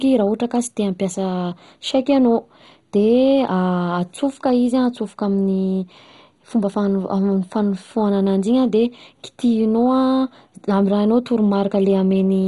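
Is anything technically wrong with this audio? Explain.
Yes. Throughout, the speech sounds dull and gurgling, with nothing above 11.2 kHz. Likely MP2 compression near 56 kbps, switching off starved sub-bands and coarsely quantising the rest.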